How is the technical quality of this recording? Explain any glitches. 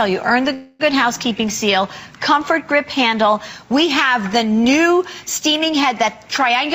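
The recording has one glitch. From 0.53 to 0.81 s there is a call audio freeze. The last sound is stretched into a fading buzz or hiss for about 0.26 s. Delayed packets likely drained the jitter buffer. Playback then resumes where it stopped, so nothing is lost, but everything after arrives 261 ms later.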